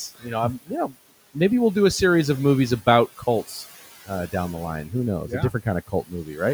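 Throughout, noise suppressor artifacts pull the room noise, which sits about 19 dB below the speech, down by about 13 dB between words. On a spectrogram, the background floor darkens in the gaps and fills back in under speech.

Speech cut by the noise suppressor occurs at 0.15–0.29 s (just before "know I'm"), at 0.62–0.95 s (between "know I'm" and "maybe we'll do a"), and at 5.87–6.41 s. Parts of the speech were treated as noise and dropped by about 17, 19 and 17 dB, affecting roughly a tenth, a sixth and a third of a second. These show as sudden dips in the waveform envelope and sound swallowed.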